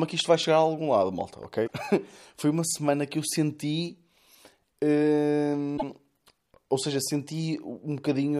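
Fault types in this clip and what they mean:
Damaged data in a compressed stream, at 1.63 to 1.70 s and 5.74 to 5.83 s: corrupted bytes in the encoded speech make the decoder misread those frames and lose sync, producing two brief garbled blips of roughly 70 and 100 ms before clean decoding resumes.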